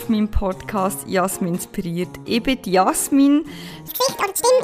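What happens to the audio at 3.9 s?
From 3.88 s to the end, a section at the wrong speed plays at 1.99 times normal, likely from a clock mismatch, so the sound jumps about ten semitones higher and hurried.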